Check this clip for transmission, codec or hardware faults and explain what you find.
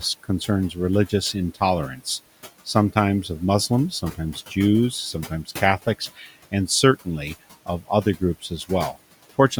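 The faults here come from the noise suppression stage, not from transmission or the codec. Two problems can be heard.

Noise suppressor artifacts run through the whole clip. The suppressor estimates the steady background and pulls down, frame by frame, every band it judges to be noise, here by about 16 dB. The room noise, which sits about 19 dB below the speech, drops away in the gaps and comes back under the speech.

Speech cut by the noise suppressor occurs between 5.86 and 6.34 s. In that stretch the suppressor misjudged part of the speech as background and turned it down with the noise, by about 14 dB at the deepest point. Part of that half-second window, roughly a fifth of a second in total, is hit. Those parts sound swallowed and faint.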